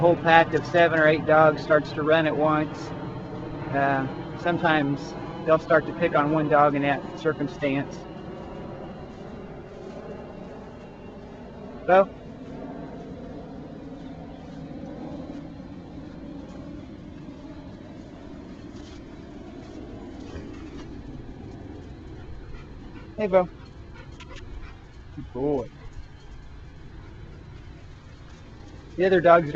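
No technical faults can be heard anywhere in the recording. Nothing in the audio calls for a timestamp or a closer look.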